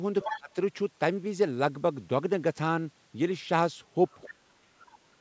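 A short speech recording shows two kinds of call-path fault, each appearing twice. From 0.22 to 0.37 s, and again from 4.11 to 4.28 s, there is other side's voice leaking through: a second voice, roughly 10 dB below the talker at first and about 25 dB below later, most likely loudspeaker echo the canceller failed to remove. On a spectrogram it shows as lower-level harmonic traces that don't line up with the main voice. The second fault is speech suppressed in double talk, from 0.32 to 0.56 s and from 4.28 s to the end at 5.2 s. The talker's level sinks by about 25 dB and then by around 40 dB, over about a fifth of a second and then most of a second. This is likely the canceller ducking both voices while they overlapped. The waveform envelope visibly collapses, and the spectrogram thins to near-empty bands, with its upper content stopping at 8 kHz.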